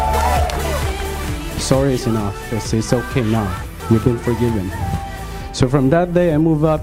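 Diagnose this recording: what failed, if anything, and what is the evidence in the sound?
Nothing failed; no fault can be heard anywhere.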